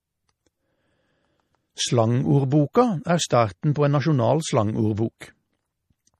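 The whole clip has nothing above 14.5 kHz. The treble stops abruptly at that line. The speech sounds watery and swirly, and sibilants carry metallic chirps. The likely cause is MP3 compression at a low bitrate, around 40 kbps. Short of bits, the encoder cuts the top band at a fixed point. It also zeroes weak frequency lines. Those lines flicker on and off from frame to frame, which makes the swirl.

Pre-echo appears three times. At 2.73 s, a brief hiss of about 18 ms comes just before a sharp onset. At 3.74 s, a similar 17 ms smear comes just before "på en nasjonal". From 5.18 to 5.21 s, a longer one of about 26 ms leads into another attack. In each case the codec spread noise across a whole block, so the noise meant for the loud onset leaked into the silence before it. The attacks sound soft.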